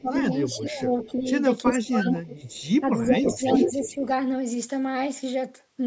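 Speech recorded through call processing, band-limited to nothing above 8 kHz, shows two recurring faults. Speech suppressed in double talk dips the level at 0.00–1.27 s (a mild drop of about 10 dB, around 0.7 s in total), at 1.65–2.13 s (a deep cut of about 30 dB, roughly 0.3 s) and at 2.80–4.09 s (shallow, about 5 dB, some 0.7 s). The likely cause is an echo canceller that, with both ends talking at once, could not tell the near talker from loudspeaker echo and attenuated everything. On a waveform these spans appear as sudden notches in the envelope, and on a spectrogram as fading or gapped bands, deepest around 1.7–2.1 s. Echo leak puts a delayed copy of the speech back into the signal at 0.16–1.09 s (about 15 dB under the speech), 1.67–1.75 s (about equal level), 2.09–2.69 s (about 5 dB under) and 3.09–3.99 s (about 5 dB above, so the echo dominates). It lags by 357 ms, and by 333 ms in the last stretch, likely because a loudspeaker side's canceller left residual echo that was sent back. 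A spectrogram shows duplicated harmonic patterns shifted about a third of a second to the right, often thinner or chopped.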